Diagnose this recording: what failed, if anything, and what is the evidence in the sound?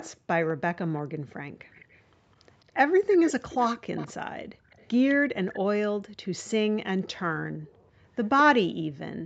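A faint copy of the speech trails it by 206 ms at 0.0–2.02, 2.68–4.13 and 4.7–5.54 s, roughly 15–25 dB down, showing as ghost harmonics. This is likely echo leak from incomplete echo cancellation in call processing.

Background gated by the echo canceller, also in call processing: the room floor dips about 17 dB at 4.55–4.7 s and about 40 dB at 7.49–7.68 s, appearing as dark gaps in the noise band.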